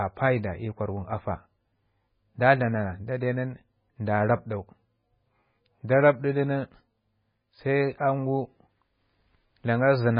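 Heavy, likely MP3 compression runs through the whole clip, with damage consistent with a very low bitrate of around 16 kbps. Short of bits, the encoder has cut the treble at a fixed point, leaving nothing above 5.1 kHz, and has discarded weaker frequency lines that flicker in and out between frames. The speech therefore sounds dull and muffled, with a watery, swirling texture, metallic chirps on s sounds, and smeared consonant attacks.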